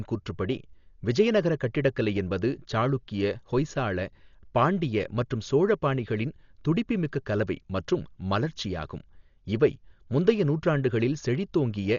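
A speech clip with heavy codec damage throughout. Nothing sounds above 6.9 kHz, so it is dull. A rough, fluttering noise surrounds tones. The cause is likely Dolby Digital compression, with starved frequency lines filled by dither noise, which fits a bitrate near 40 kbps.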